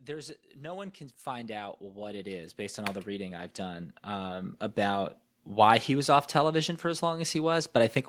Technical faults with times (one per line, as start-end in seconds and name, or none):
0.05-5.05 automatic gain rising